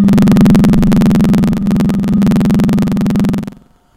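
A recording of everyday sounds carries a steady robotic rattle at about 21.5 Hz that follows the signal throughout. This is buffer tearing. The writer and reader of the output ring buffer have drifted so they cross inside each period, which fits a 2048-sample buffer. Roughly a fifth of every buffer replays audio from about a tenth of a second earlier, with hard joins at both edges. At 2.15 s the sound briefly jumps forward. This comes from compressed frames being skipped: a couple of frames went unplayed, dropping roughly 50 ms of audio.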